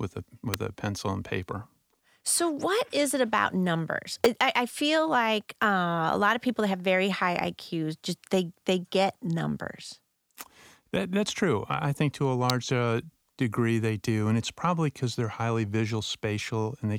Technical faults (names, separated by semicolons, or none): electrical switching spike